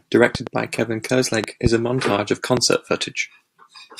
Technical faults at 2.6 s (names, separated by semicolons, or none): loud pop